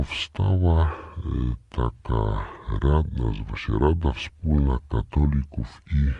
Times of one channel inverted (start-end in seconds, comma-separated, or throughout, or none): none